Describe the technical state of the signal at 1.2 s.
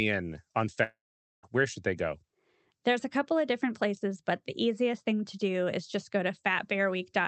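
At 1.2 s the signal sits inside a long network dropout running from 0.83 to 1.45 s, likely caused by audio packets failing to arrive for about 0.6 s. The receiver stretched the last received sound into a fading buzz or hiss, and by 1.2 s that fill has decayed to near-silence, with roughly half a second of the gap left empty. The speech resumes at 1.45 s with the missing portion simply gone.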